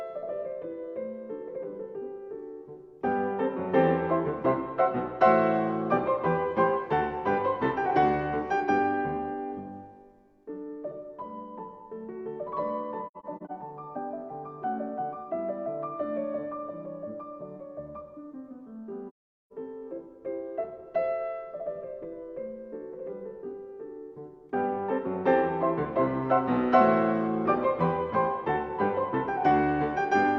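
From 13.07 to 13.52 s the sound drops out in several short, soft-edged gaps, the longest around a tenth of a second, and from 19.08 to 19.52 s it falls away into one silent hole of about 430 ms, again fading out and back. Both are AAC frame loss with muting. The decoder zeroed the missing frames, and the overlapping windows smoothed the edges, which fits roughly five scattered frames, then ten consecutive ones.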